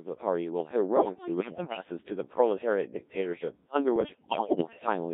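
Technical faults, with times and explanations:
Throughout: Codec 2 vocoder. The speech has the robotic, buzzy quality of a very low-rate digital-radio vocoder, consistent with about 1.3 kbit/s, band-limited to roughly 200 Hz to 3.7 kHz. Only pitch, voicing, energy and a coarse spectral envelope survive the link, and the decoder rebuilds the sound from sine waves. The original waveform is gone, so breath, texture and anything that isn't the single voice come out heavily smeared and synthetic.
0.98–1.82 s and 3.96–4.86 s: bit errors on digital voice radio. In these two stretches the synthetic voice lurches in pitch and loudness and its tone colour shifts abruptly. It breaks into warbles, bleeps and garbled robotic fragments. The pattern points to a high error rate, around one bit in ten, with roughly twenty consecutive frames corrupted in each burst. Because every bit steers a whole frame's pitch, level, voicing or spectrum, single flips produce gross audible jumps.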